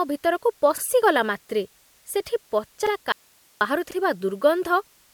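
From start to finish, the speech carries generation loss, likely from repeated lossy re-encoding, with the character pointing to MP3 at around 96 kbit/s passed through the codec roughly three times. Each pass re-quantised the audio on a shifted frame grid, so the noise and spectral gaps compounded. The result sounds swirly and hollow, more smeared than a single encode at that rate would leave, with consonant onsets softened.

At 0.78 s and again at 2.87 s there is an overlapping-chunks fault. The audio appears to have been handled in blocks, with each block starting before the previous one finished, which fits chunks of about one second. At each join a 44 ms slice plays twice. It sounds like a brief stutter or click at the seam, so the flow of the speech hitches for a moment.

From 3.12 s to 3.61 s comes an audio dropout to a faint residue, likely caused by the signal path losing its source while the downstream chain stayed live. 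For about 0.49 s the speech vanishes abruptly, leaving only hiss about 35 dB below the normal level. It then returns just as suddenly. The hard edges at both ends make it sound like a break in the signal rather than a pause or a fade.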